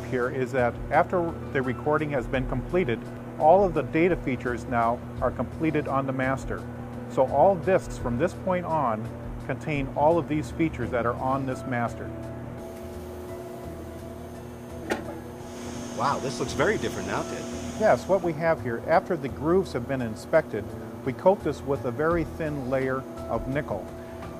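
No technical faults are audible.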